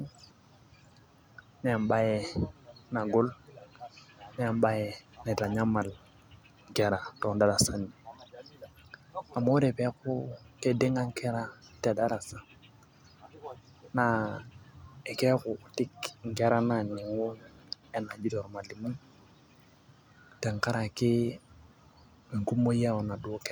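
No technical faults are audible anywhere in the speech recording.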